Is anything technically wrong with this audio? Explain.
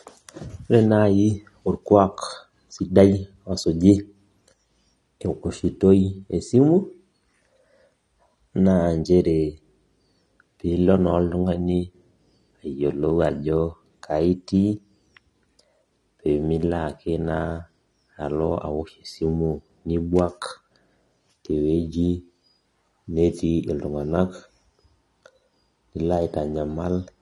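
Yes, there's AAC compression damage running right through this speech, and it's plainly audible. Nothing comes through above 11.8 kHz, so it sounds dull. Sibilants get a smeared, fizzy, warbly texture, likely from a low-bitrate AAC-LC encoder, which fits something around 32 kbps.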